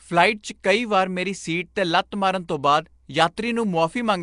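The whole speech clip has that rough, hissy halo and underwater smear, with nothing above about 10.6 kHz. It's likely Nellymoser compression, Flash's old microphone codec, at something like 44 kbps. It codes fixed blocks at two bits a sample and fills starved bands with noise.

At 3.36 s there's a brief pre-echo, a hiss spread over about 12 ms just ahead of a sharp attack. The transform block smeared noise meant for the loud onset into the quiet moment before it, so that attack comes across soft.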